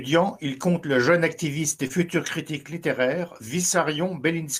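A speech clip with one short concealed packet loss, from 1.87 to 1.92 s. It falls between "le jeune activiste et" and "critique littéraire". About 20 ms of audio failed to arrive in time. The receiver covered the gap by extending the preceding sound for roughly 21 ms. It then crossfaded back into the real signal. The result is a brief smear at that join.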